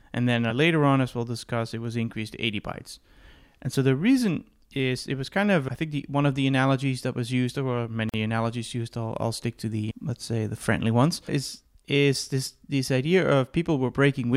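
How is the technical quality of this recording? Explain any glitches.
The speech has one glitch, a gap at a join of encoded pieces, from 8.09 to 8.14 s. The audio appears to have been encoded in separate pieces, probably about 10 s each, and spliced without trimming the encoder's start-up delay and final-frame padding. That leftover silence stays in the stream, so a 44 ms hole opens in continuous speech with smeared edges, and the talker resumes exactly where they stopped, on "analogies used I'll I'll".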